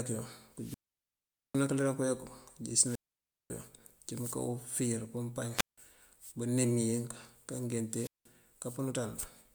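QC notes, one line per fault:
0.54 to 1.65 s, 2.82 to 3.52 s, 5.51 to 5.78 s and 7.88 to 8.31 s: wireless microphone squelch dropout, four times. Each time the transmitter's radio signal weakens, a short swell of hiss comes in, then the receiver's squelch closes and the speech drops to near silence for 0.80 s, 0.55 s, 0.17 s (just after "mëënká ufíir pëëmpañ") and 0.18 s. The sound returns as the signal recovers.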